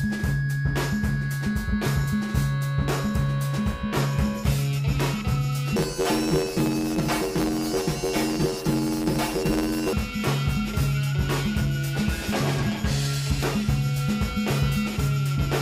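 From 5.76 s to 9.93 s the audio takes on a robotic buzz. This is planar audio read as interleaved. Each short block stores all of one channel and then all of the other, but the player reads it as alternating pairs. Every block plays twice at double speed, left half then right half, so the overall pace holds. The blocks last 11.61 ms, which fits 512 samples. That repeats at 86.1 Hz, the pitch of the buzz. No clear octave shift is heard.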